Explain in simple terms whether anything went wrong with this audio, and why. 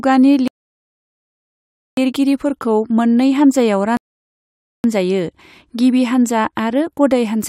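The player twice ran out of downloaded audio, a rebuffering stall: the speech stops silent from 0.48 to 1.97 s and 3.97 to 4.84 s, then resumes exactly where it paused.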